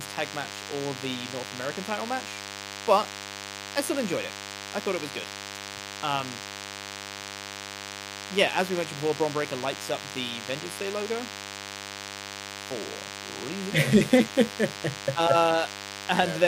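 DECT cordless phone buzz runs through the whole speech clip, from start to finish. A DECT handset or base station close to the recording chain transmits a short radio burst every 10 ms, and some stage of the audio circuit rectifies those bursts into the signal. The result is a steady, thin, harmonic-rich buzz at 100 Hz, sitting only around 10 dB below the speech, so it stays prominent under every phrase and in the pauses.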